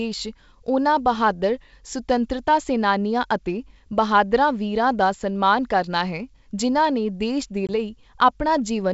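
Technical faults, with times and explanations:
7.67 to 7.69 s, packet loss on an ADPCM call: about 20 ms of speech, a couple of packets' worth, drops to hard-edged silence. The decoder's predictor and step size then lose step with the sender's. Speech resumes mistracked until they realign. The surrounding G.722 wideband coding stays clear.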